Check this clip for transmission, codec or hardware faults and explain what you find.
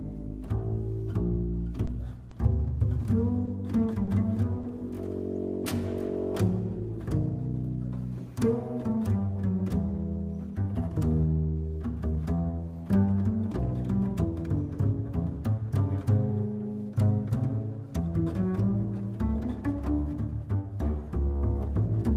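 The clip has six instances of short concealed packet loss, at 1.85, 2.29, 3.45, 3.93, 4.05 and 4.61 s. Each time, about 20 ms of the stream failed to reach the decoder in time, and the receiver synthesised a 20 ms patch by extending the preceding sound before crossfading back into real audio. Each of these spots sounds like a brief smear or wobble lasting a few hundredths of a second, and any very short sound falling in a gap can disappear.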